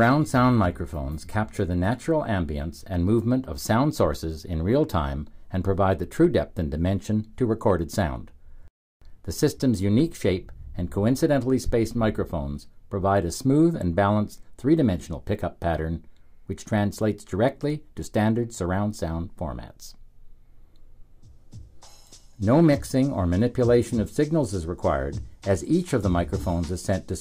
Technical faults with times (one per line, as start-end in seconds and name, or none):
none